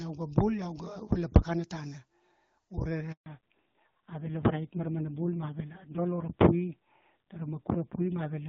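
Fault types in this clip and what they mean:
Handover gap: the call switched networks at 3.12 s, so no speech got through and the sound just drops out for about 140 ms.
Fallback to narrowband: from 3.26 s it's lost HD Voice, with nothing above 4 kHz, and it sounds duller and rougher, like a low-rate narrowband codec.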